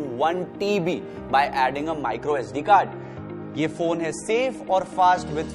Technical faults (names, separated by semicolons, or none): adaptive stream at a lower bitrate